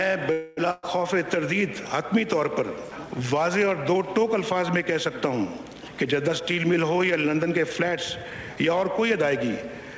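From 0.32 to 0.59 s the sound stalls: the last moment before it is drawn out as a fading buzz or hiss for about 250 ms, then the audio picks up exactly where it left off with nothing skipped. This is likely a call audio freeze, with packets held up in transit until the jitter buffer ran dry. Unlike a loss, the gap is inserted rather than substituted, so everything after it arrives a quarter of a second later.

Shortly after, from 0.71 to 0.85 s, comes a burst of packet loss. Around 120 ms of audio never arrived in time, and the receiver covered the hole by extending the preceding sound and turning it down as the gap went on. When the audio resumes it has jumped ahead by that same 120 ms. The concealment resembles the freeze, but here content is missing and the timing does not slip.

From 5.93 to 8.83 s a jitter buffer speed-up sets in. With more audio queued than the buffer aims to hold, the receiver repeatedly cut out short slices one or a few pitch periods long, trimming roughly a third of a second in total. 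The passage runs about 8% fast and sounds hurried, yet pitch stays where it was, which distinguishes it from a simple playback-rate change. All of this sits on a G.722 call path, which leaves nothing above 8 kHz.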